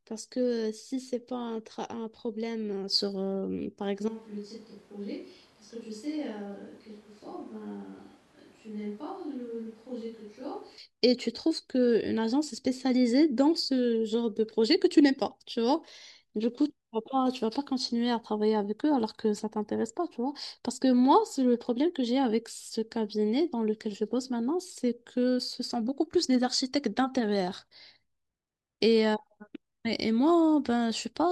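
At 4.08 s the speech abruptly turns roomy and hollow, losing its low end and dropping in level by about 10 dB, while background noise rises to sit only around 25 dB below the speech. The sound stays distant until 10.78 s, when it snaps back just as suddenly. This is likely a switch to a distant microphone: the close microphone's signal was lost or left out, so a pickup farther away, such as a camera microphone, carried the recording for that stretch.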